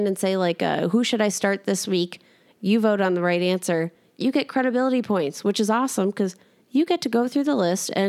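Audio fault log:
Nothing in this speech recording stood out as a problem on listening.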